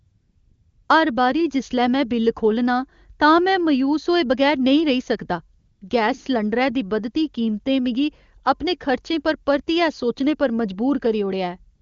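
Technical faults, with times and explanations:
0.0–0.89 s, 5.59–5.81 s and 11.75–11.81 s, AMR comfort noise: at the start, in one short pause and in the final instant, the phone stopped sending speech frames and the receiver filled the gap with generated noise. The real background gives way to a steady, smooth hiss that switches in and out at the pause edges. Unlike a noise gate or dropout, these gaps are never silent.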